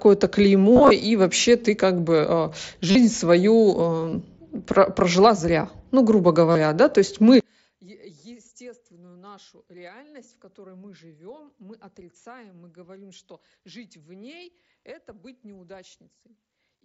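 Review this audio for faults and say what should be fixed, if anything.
Concealed Bluetooth headset packet loss at 0.73–0.91 s, 2.91–2.95 s (after "ты как бы э"), 4.00–4.12 s, 6.51–6.55 s (between "прожила зря ну грубо" and "да то есть"), and 14.80–14.83 s. Lost headset packets were filled by repeating recent waveform, giving brief buzzy held tones rather than silent gaps. Better radio proximity and less 2.4 GHz interference would prevent this.

From 7.40 s, after "да то есть", to the end, the level falls by about 28 dB, leaving a faint residue. The likely cause is one channel inverted, cancelling on the mono sum. Unlike a dropout, some sound remains. Checking polarity before summing to mono prevents it.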